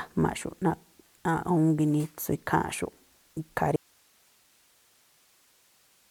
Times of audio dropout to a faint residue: 3.76-6.11

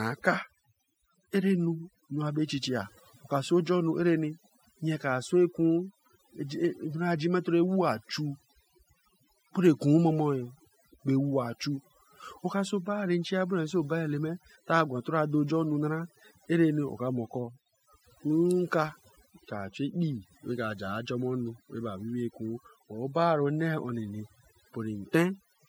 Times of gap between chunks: none

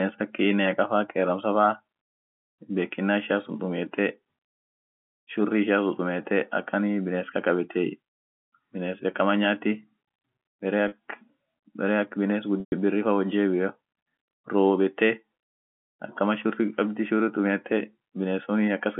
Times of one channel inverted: none

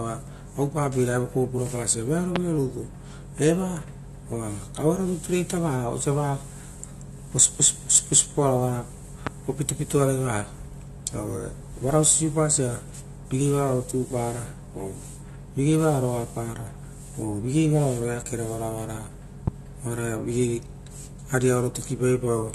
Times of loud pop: 2.36-2.38, 9.27-9.29, 19.47-19.50

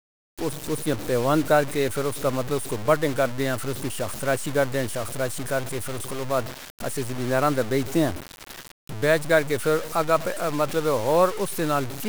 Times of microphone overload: none

